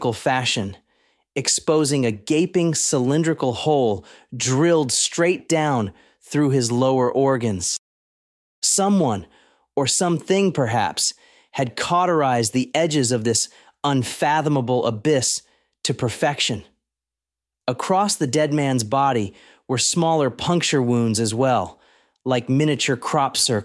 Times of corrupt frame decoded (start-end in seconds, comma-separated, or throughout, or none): none